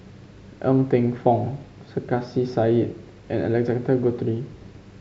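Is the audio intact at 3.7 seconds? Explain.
Yes, at 3.7 seconds the speech runs intact, with no dropout, click, distortion or other fault to be heard.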